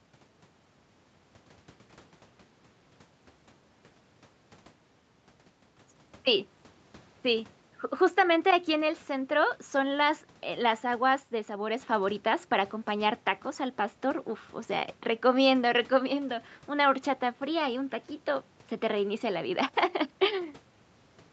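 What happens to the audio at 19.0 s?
At 19.0 s the speech is intact, with nothing more than the normal call-path band limit around 8 kHz.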